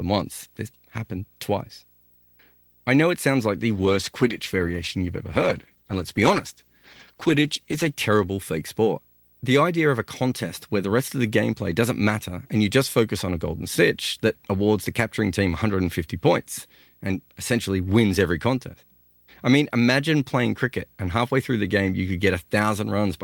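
Video or display buzz runs through the whole speech clip: a screen or video cable couples into the audio path, producing a buzz at the 59.94 Hz field rate with hash above it and a 15.7 kHz line tone, roughly 35 dB below the speech.

A call bitrate drop follows from 3.79 s to 8.05 s. The bandwidth estimate collapsed and the encoder coded far more coarsely for about 4.2 s. The speech turns rough, watery and dull, in a way that fits a fall from around 48 kbps to around 14 kbps, before clarity returns.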